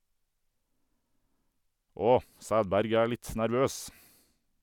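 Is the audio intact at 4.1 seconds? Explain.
Yes, the speech at 4.1 seconds is intact, with no dropout, click, distortion or other fault at that point.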